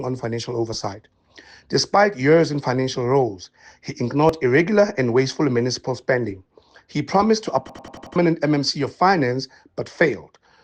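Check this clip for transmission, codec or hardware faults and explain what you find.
Two faults are audible.

At 4.29 s there is an overlap between stream segments. Overlapping time stamps made the player trim real audio. The waveform jumps, heard as a tiny skip.

From 7.69 to 8.16 s there is a system hang loop. The system froze while the hardware replayed one 93 ms buffer five times, which fits a 4096-sample buffer. It sounds like a stutter at 10.8 Hz, and about half a second of audio is lost.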